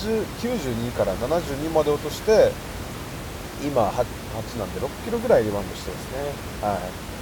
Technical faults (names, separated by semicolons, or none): none